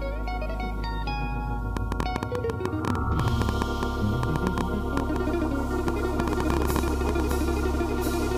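A train of clicks runs from 1.77 s to 7.32 s: around forty similar sharp pulses arriving at an uneven pace, averaging about 7.75 per second, and peaking roughly 15 dB above the surrounding sound. They are heard as a ticking, popping layer laid over the audio and continuing through its quieter moments. The likely cause is an external pulse source, such as interference from nearby equipment, a faulty connection or a power supply fault.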